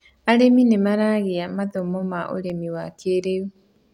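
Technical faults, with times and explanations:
2.24–2.62 s, CD scratch ticks: four short ticks land in the speech here, roughly eight a second, the longest only around a millisecond. That regular spacing is the giveaway. A scratch or blemish on the disc passes under the laser once per revolution, each time wiping out more data than error correction can rebuild, so the player patches or mutes a tiny stretch and you hear a click on every turn.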